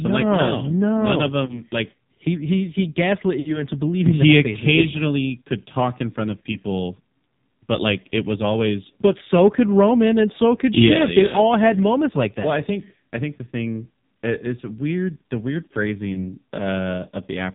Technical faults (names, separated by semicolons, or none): AMR narrowband mobile codec; lost AMR speech frames